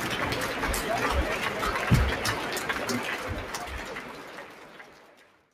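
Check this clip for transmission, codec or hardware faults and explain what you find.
One fault is present, running through the whole clip. A noise suppressor applied to music or sounds, built for speech, treats sustained tones, ambience and reverb as noise and pulls them down by around 5 dB. Attacks mostly pass while held parts and tails sink, so the sound pumps, flutters or thins out.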